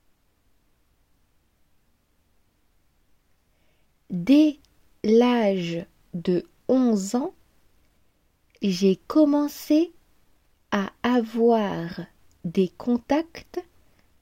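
No technical faults can be heard.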